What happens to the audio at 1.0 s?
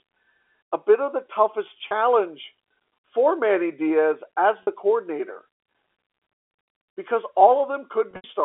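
Nothing goes wrong at 1.0 s: the speech carries on intact through that moment, with only the narrow telephone-band sound of the G.711 line coding.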